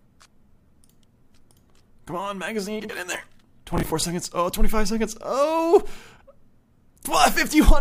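The audio has two kinds of trouble. First, frames out of order: at 2.80 to 2.90 s, two neighbouring blocks of about 46 ms each arrive swapped and get decoded that way, so that little stretch plays back-to-front in halves. You hear a garbled flutter, and the 46 ms length fits runs of two codec frames. The same thing happens again at 6.16 to 6.22 s with shorter 23 ms blocks, which points to single frames trading places. Nothing goes missing either time, because it's only reordered. Second, at 3.73 to 4.03 s there's processor overload crackle. The machine couldn't finish its audio buffers on time, and the rhythm suggests buffers of around 10 ms with something like fifteen deadlines missed across that stretch. Each miss replays a scrap of old audio with hard edges, so for those 0.3 s you get a gritty, tearing crackle riding on the sound. It clears as soon as the load drops.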